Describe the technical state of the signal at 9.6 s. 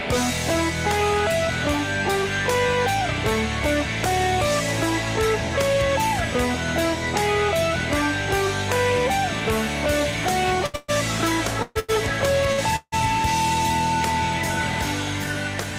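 At 9.6 s the signal is intact, with no audible fault at that moment.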